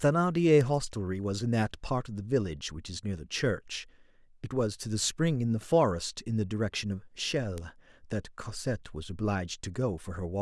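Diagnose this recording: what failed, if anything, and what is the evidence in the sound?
Two isolated, sharp ticks cut through the speech, one at 0.61 s and another at 7.58 s. Each is broadband, lasts a single sample and peaks at about -20 dBFS, with no relation to the speech around it. Both are bit error spikes from the digital storage or transfer path. One flipped bit in a stored sample throws its value off by a power of two for that instant before the waveform resumes.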